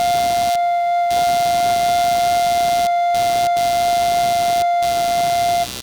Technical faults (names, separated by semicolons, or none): computer activity noise